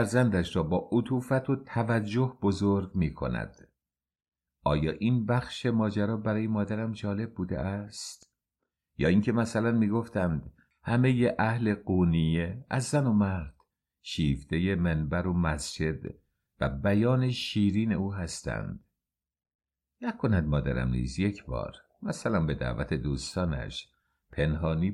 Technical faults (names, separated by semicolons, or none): none